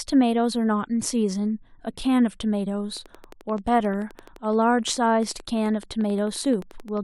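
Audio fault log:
2.97–6.98 s, train of clicks: a steady ticking runs over the speech for about four seconds, around fifty sharp pops at a regular 11.5 per second, each with much the same shape and peaking roughly as loud as the speech itself, so they stay audible through the pauses as well as under the talking. The even spacing and repeated pulse shape point to an outside source, likely electrical interference from nearby equipment or a faulty connection or power supply injecting the pulses.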